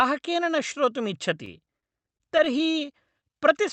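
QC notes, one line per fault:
1.45–2.90 s, repeated stalls (stutter): right after "न श्रोतुम्", the jitter buffer keeps running dry, with 16 short gaps, none longer than 30 ms, stretched over with repeated sound. Nothing is lost, but about 14% of that stretch is filler, so the speech drags and stutters. The Opus call path's top end stops around 8 kHz.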